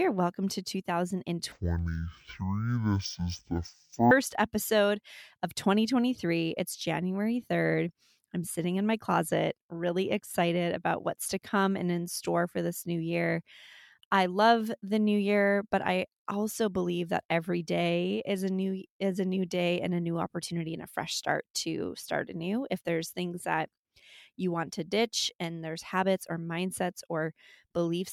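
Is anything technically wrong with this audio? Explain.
Yes, there's one fault. From about 1.52 s to 4.11 s, just before "episode of", the speech hits a stereo read as mono problem. The left and right samples got treated as one channel in sequence, so each stereo frame plays out as two mono samples. That's why the speech crawls at half speed and drops an octave, a full 12 semitones, and you also get a faint mirrored copy of it up in the top half of the spectrum.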